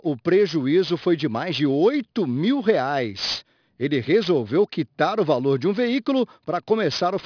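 From the first moment to the last, this speech has aliasing. It sounds like it was dropped to a much lower sample rate, something that fits roughly 11 kHz, without a proper filter beforehand. Everything above about 5.5 kHz has folded back down below that point as unrelated tones, sitting maybe 20 dB under the signal. Sibilants come out gritty and metallic, and the top of the spectrum runs right up to the edge.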